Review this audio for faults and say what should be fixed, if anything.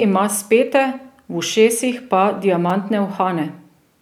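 At 2.69 s there is a brief jumbled moment. This is chunks out of order. One short block of audio, about 5.8 ms long, plays one block later than it should. It swaps places with its neighbour. No sound is lost, but the sequence breaks. That creates three hard joins within a few milliseconds. The tiny block length points to a small processing buffer being handed on in the wrong order. Prevent it by tagging each buffer with a sequence number and reordering or waiting for late blocks before playback or writing.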